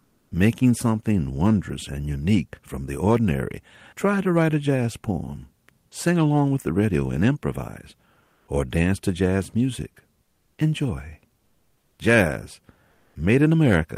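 Speech with comfort noise in place of the background at 8.23–8.47 s (between "the radio and improvise" and "or dance to jazz"), 10.27–10.57 s, 11.41–11.95 s and 12.91–13.15 s: featureless synthetic hiss replaces the real background, likely from discontinuous transmission.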